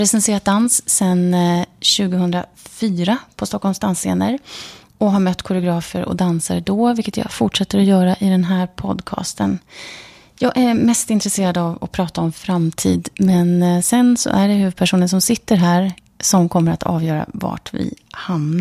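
No technical faults occur at any point in the speech.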